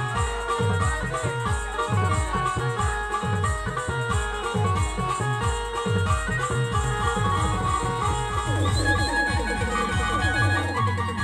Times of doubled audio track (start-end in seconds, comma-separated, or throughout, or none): 6.84-10.62